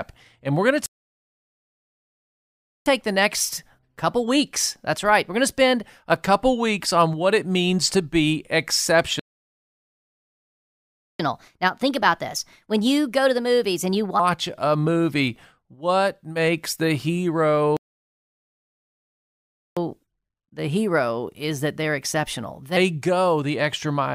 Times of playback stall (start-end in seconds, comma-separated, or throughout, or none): 0.86-2.86, 9.19-11.19, 17.77-19.77